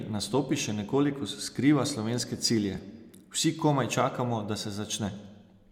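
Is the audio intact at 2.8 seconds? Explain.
No. AAC frame loss with concealment hits from 2.75 to 2.79 s. About 21 ms of coded audio, consistent with a single frame, went missing, and the decoder rebuilt that gap from the preceding spectrum, leaving a brief smeared, noisy or phasey patch in the speech.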